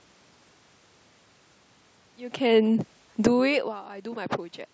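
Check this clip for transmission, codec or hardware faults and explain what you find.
One fault is audible, a case of automatic gain falling between 2.5 and 3.94 s. The automatic gain control judges the input too loud, or its background noise too strong, and pulls its gain down by about 7 dB across those 1.4 seconds. Because the reduction is applied to the whole signal, the voice and the room noise behind it sink together rather than the voice alone receding. This overlaps the smooth fade-in that completes at 3.2 s.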